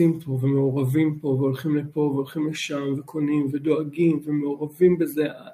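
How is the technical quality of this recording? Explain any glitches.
No glitches turn up anywhere in this recording; there's nothing technical to flag or explain.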